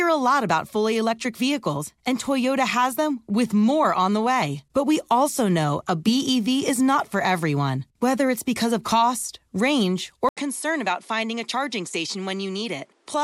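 At 10.29 s the speech cuts out for 80 ms, then returns through what is likely an input switched to a poorer device, and stays that way to the end. After the switch nothing is present above 11.4 kHz, so the speech loses its air and sounds duller. The level drops by a few decibels, and a different background noise sits well below the speech, about 40 dB down.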